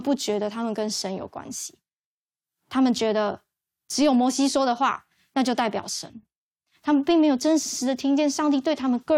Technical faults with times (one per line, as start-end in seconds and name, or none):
7.65-7.79 repeated frames